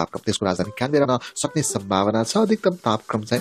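From 0 to 1.65 s, software likely squeezed this section to fit a shorter length, running it about 1.39 times faster while dropping short pieces to hold the pitch steady. The result is a time-stretched section that sounds rushed, with the pace jumping abruptly at the boundary.

Inside that stretch, from 1.03 to 1.06 s, there is damaged data in the compressed stream. The decoder misreads the corrupted frames, loses sync and hunts for the next valid header, producing a brief glitch in the audio.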